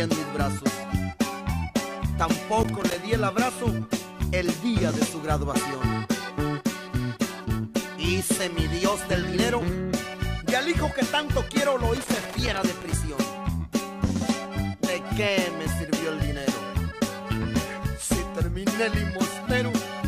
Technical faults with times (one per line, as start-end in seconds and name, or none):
2.61-2.94 loose connector crackle
11.96-12.93 loose connector crackle